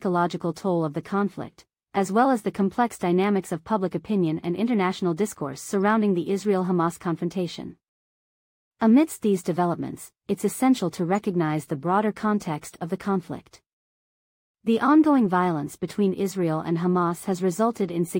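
At 10.98 s, between "these developments it's essential" and "recognize the broader context", a corrupt frame was decoded: flipped bits in a single compressed frame sent energy to the wrong frequencies, giving a brief chirp, blip or burst of noise peaking around -35 dBFS, seen as a thin vertical smear on a spectrogram.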